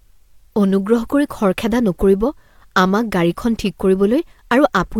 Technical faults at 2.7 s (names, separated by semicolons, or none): none